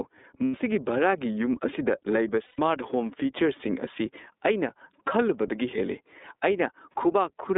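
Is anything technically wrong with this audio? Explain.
Yes, there are three separate problems here.

Gain pumping runs through the whole clip. The gain swings by around 10 dB as loud sounds arrive, so the level keeps breathing in and out. The likely cause is input gain set far too high, with a fast limiter or compressor clamping down on every peak. Loud and quiet passages end up squashed toward the same level.

The speech has also been through the iLBC codec, and the damage is plainly audible. The band is cut to roughly 250 Hz to 3.7 kHz, so everything above that is gone and the low end is thin. Each frame's excitation is coded on its own, which gives the voice a slightly rough, synthetic edge. The sound points to the 30 ms frame mode, at about 13 kbps.

On top of that, there are lost iLBC frames at 0.45–0.56 s, 2.46–2.59 s, around 5.07 s, and 6.93–6.96 s. The first two gaps run about 90 ms and 120 ms, which fits three and four dropped frames. 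The last two are single 30 ms blips. In each gap the decoder repeats the last pitch cycle mixed with noise, so you hear a held, slightly buzzy, breathy vowel. Because iLBC frames stand alone, the voice snaps back almost immediately afterward.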